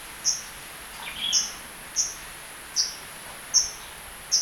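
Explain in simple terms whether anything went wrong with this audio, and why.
Nothing went wrong here: no dropouts, glitches, distortion or other faults can be heard anywhere in the recording.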